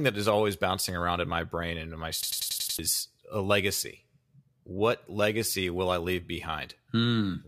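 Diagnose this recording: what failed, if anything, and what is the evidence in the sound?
A system hang loop failed at the driver or buffer stage. From 2.23 s to 2.79 s the speech stops advancing and one short fragment repeats exactly, six times over. Each repeat lasts about 93 ms, giving a machine-gun stutter at roughly 10.8 Hz. That loop length fits a 4096-sample buffer. The host or driver stalled and stopped refilling the ring buffer, so the hardware kept replaying stale data. About half a second of real audio was lost.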